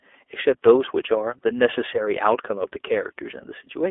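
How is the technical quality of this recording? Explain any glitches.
The recording has one problem that runs through the whole clip: it has passed through iLBC codec coding, and the damage is plainly audible. From start to finish, the audio sits in a narrowband line of roughly 300 Hz to 3.5 kHz, so the speech loses its low body and all of its upper brightness. iLBC codes each frame's excitation on its own, without drawing on the previous frame. Here the frame rhythm fits 30 ms frames at a rate near 13.33 kbps. As a result, the voice sounds clear but rough, slightly synthetic.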